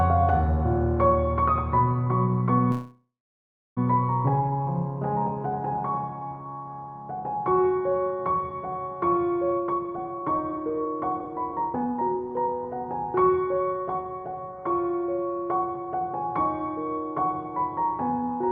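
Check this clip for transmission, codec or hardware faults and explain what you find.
Two faults stand out.

From 2.71 to 3.79 s there's a call audio freeze: the last sound trails off and goes silent for about 0.7 s, then resumes. Nothing is lost, just delayed. It's likely packets stalled and emptied the jitter buffer.

From 9.52 to 14.50 s, jitter buffer speed-up: the buffer trims pitch-period slices to shed backlog, so the audio runs about 21% faster at the same pitch, cutting roughly a second.

The Opus call path adds its usual coding noise, and the top end stops around 8 kHz.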